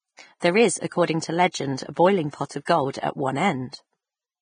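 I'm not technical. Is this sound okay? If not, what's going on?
No. Throughout the recording the speech sounds hissy and grainy, and nothing is heard above about 9.7 kHz, so it lacks crispness. This is likely Vorbis compression applied heavily, which saves space by cutting off the top end and roughly approximating the fine detail that remains, turning it into a fizzy texture. Plain background noise stays steady, but this graininess rises and falls with the voice because it comes from the voice itself.

At 2.31 to 2.33 s, between "a boiling" and "of gold at one", there is pre-echo. A short hiss of about 26 ms comes just before a sharp sound begins, and that sound's start is softened. The compression handles audio in short chunks and spreads its errors across each one, so a sudden onset late in a chunk leaks noise into the quiet moment before it. A click or dropout would not do this, because the hiss comes before the sound it belongs to.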